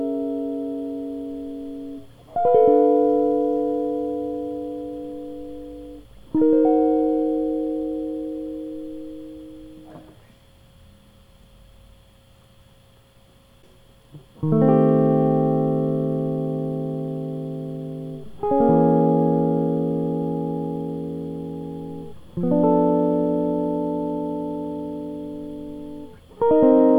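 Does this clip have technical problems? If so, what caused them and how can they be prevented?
No, nothing in this music clip points to a technical fault, so there is no cause to trace and nothing to prevent.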